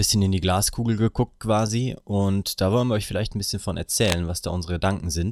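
Right near the end, from about 4.02 to 4.21 seconds, there's a short burst of cable scratch noise: a rough, uneven scratching that sits on top of the speech for under a fifth of a second and isn't far below it in level. That ragged, crackly texture is what you get when contact resistance jumps around quickly, so it's likely a worn cable, plug or control being nudged while recording.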